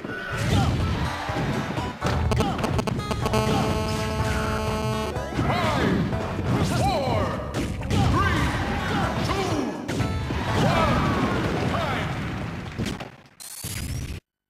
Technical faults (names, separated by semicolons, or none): GSM signalling bursts; GSM phone buzz; periodic USB or driver dropouts